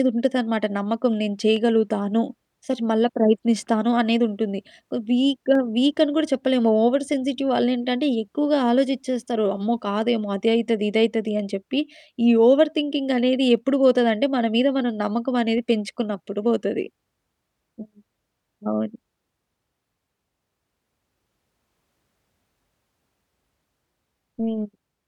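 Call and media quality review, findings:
Periodic USB or driver dropouts, 1.56 to 23.59 s: regular ticks every 2.0 s, roughly ten of them, only audible over speech. Something blocking the USB bus or audio driver on a timer; tiny slivers, well under a millisecond, skipped outright, not silenced.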